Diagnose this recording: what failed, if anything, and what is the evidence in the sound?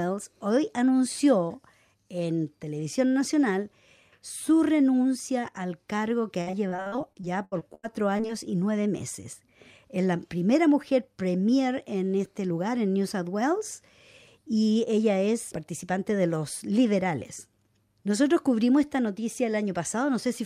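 Choppy, robotic speech from 6.41 to 8.31 s, with gaps up to 85 ms smeared over: repeated packet loss in the network, concealing about a quarter.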